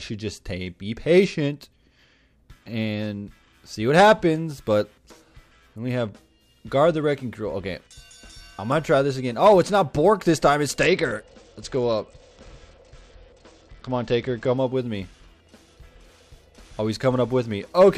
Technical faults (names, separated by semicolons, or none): Bluetooth SBC bit pool drop